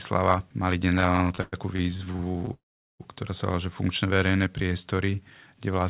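Late packet arrival repeatedly drained the receiver's jitter buffer between 0.9 and 2.52 s, producing repeated stalls (stutter) in this speech: some two dozen brief holds, the longest 108 ms, where the last sound is stretched and faded, filling about 30% of that stretch so it drags haltingly while nothing is lost. A call audio freeze follows from 2.54 to 3.02 s, likely from packets held up in transit so the buffer ran dry: the sound continues briefly, then drops to silence for about 410 ms before resuming where it stopped, inserting roughly 458 ms of gap and adding that much delay from then on. Between 4.06 and 5.24 s a jitter buffer slow-down rebuilds the reserve by repeating single pitch periods or bits of pauses, adding 178 ms so this part plays at about 86% speed, drawn out at unchanged pitch. Throughout, nothing is heard above 4 kHz, which fits a narrowband telephone codec such as G.711 A-law on the call path.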